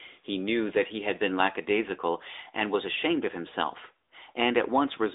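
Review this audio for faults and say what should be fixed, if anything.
Throughout, AMR narrowband mobile codec damage confines the speech to 300 Hz–3.7 kHz, nothing above 3.8 kHz, with a buzzy synthetic edge fitting about 10.2 kbps AMR-NB. Unlike simple low-pass filtering, this buzz comes from the codec's pulse-driven vocal-tract model. Prevent it by recording over a wideband path instead of a narrowband mobile call.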